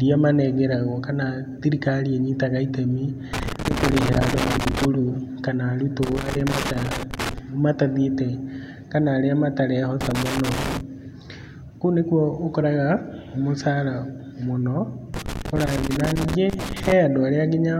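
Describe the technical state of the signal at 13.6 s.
At 13.6 s the speech signal is intact, with no audible technical fault at that moment.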